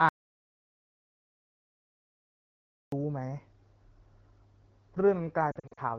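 From 0.09 to 2.92 s the input signal was likely lost, perhaps through a disconnected device, a dropped link or an accidental mute, while the recording chain kept writing silence. This is an audio dropout to silence. The speech stops abruptly almost at the start, and for about 2.83 s there is silence with no room tone or background hiss. Then the sound cuts straight back in mid-flow. Whatever was said in that stretch is gone.

Between 5.51 and 5.80 s, speech frames arriving over the radio link failed their integrity checks. The AMR wideband decoder covered each loss by repeating the last good pitch and vocal tract settings at reduced gain. These are lost AMR speech frames. About 160 ms of audio is affected, spread across roughly 260 ms in short bursts, with no single gap longer than 40 ms. That pattern fits about eight lost 20 ms frames. Instead of one clean break, the voice flutters and dips, with brief smeared, warbling patches where it sags and recovers slightly rough. 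The wideband HD Voice coding underneath sounds clear, consistent with one of the higher AMR-WB rates.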